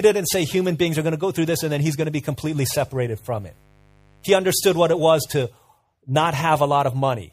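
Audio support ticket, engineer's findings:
Mains buzz from 2.44 to 5.32 s, after "going to be": unshielded or dimmer-fed path admitting 50 Hz switching spikes, harmonics into kHz range. Steady raspy buzz, about 35 dB under the speech.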